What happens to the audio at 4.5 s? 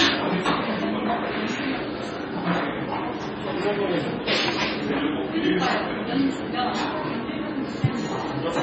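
At 4.5 s you're hearing heavy MP3 compression, present across the whole clip and not just that moment. Nothing survives above 8.1 kHz, and weak frequency lines flicker in and out frame to frame, giving a watery, swirly texture with smeared attacks. The likely cause is a very low bitrate, around 24 kbps.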